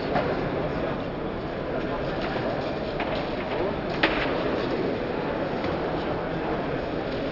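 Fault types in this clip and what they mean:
No technical faults are audible anywhere in this recording.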